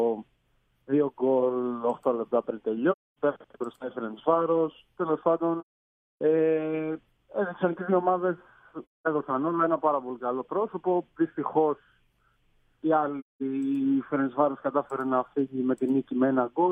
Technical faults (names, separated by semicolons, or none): AAC frame loss with muting